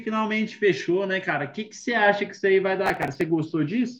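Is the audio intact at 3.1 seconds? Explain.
No. Processor overload crackle runs from 2.86 to 3.21 s, covering 3.1 s. The processor falls behind on its very short audio buffers, which sound well under a millisecond long, and misses about twenty deadlines in quick succession. Each missed buffer is skipped rather than replaced, leaving tiny hard-edged holes in the speech. Packed together, these holes are heard as a gritty, tearing crackle over the speech that stops once the load eases.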